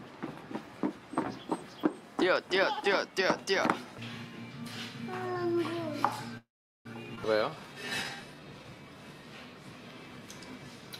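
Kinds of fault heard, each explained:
Call audio freeze: From 6.37 to 6.87 s the sound stops moving forward and the last fragment carries on as a fading buzz. About 400 ms of that is near-silent. Afterwards playback resumes right where it left off, so roughly half a second has been inserted and nothing lost. This is likely from packets held up in transit until the jitter buffer ran dry. On a spectrogram the final spectrum smears into flat horizontal bands, which then fade to a dark gap.
Skip ahead: At about 7.15 to 7.19 s playback leaps forward, and roughly a fifth of a second of audio is gone. The two sides are spliced with only a brief 15 ms fill, so the jump is abrupt rather than a pause. It comes from a stretch dropped while later audio was already queued. In the waveform the envelope changes shape suddenly at the join, and the spectrogram shows patterns cut off mid-way and butted together.
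Jitter buffer slow-down: From 7.37 to 8.95 s the audio plays at about 85% speed with unchanged pitch, stretching that span by about 239 ms. The receiver was rebuilding its reserve by repeating single pitch periods and bits of pauses. Sounds are drawn out. On a spectrogram the harmonics keep their spacing while the features widen in time, and the waveform shows near-identical cycles repeated in runs.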